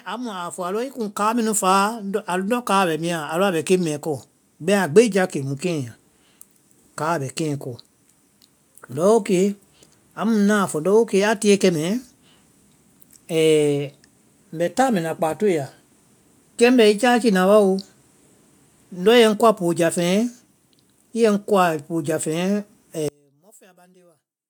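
From 0.05 s to 5.66 s, automatic gain rising: the AGC judged the input too quiet and ramped up about 12 dB, lifting the speech and background together.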